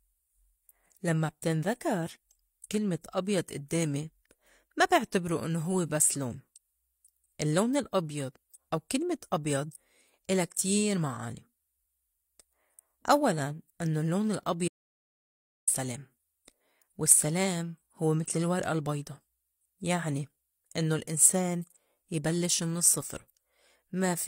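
From 14.68 to 15.67 s, an audio dropout to silence. The speech stops dead for about a second. It is likely a lost input written as silence.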